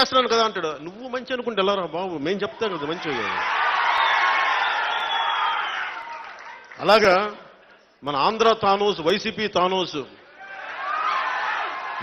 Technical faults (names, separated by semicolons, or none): periodic USB or driver dropouts